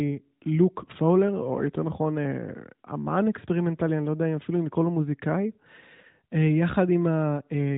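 Nothing goes wrong anywhere in this recording; there are no faults to point to.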